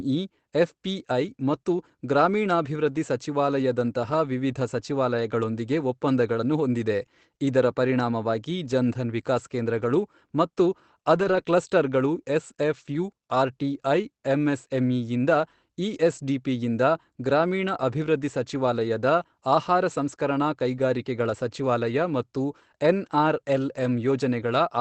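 Speech carried over an Opus call path, its top end cut off near 8 kHz, which fits a 24 kbps setting, shows two faults. A lost packet rebuilt from error correction runs from 11.15 to 11.56 s, just after "ಧನ್ ವಿಕಾಸ್ ಕೇಂದ್ರಗಳು ಮತ್ತು". Several packets went missing, and low-bitrate copies carried in later packets filled about 140 ms, so nothing drops out but that stretch sounds rougher and noisier. Within it, a short concealed packet loss at 11.43 to 11.47 s left about 20 ms undelivered. The decoder extended the preceding sound for roughly 13 ms before blending back, giving a brief smear or wobble.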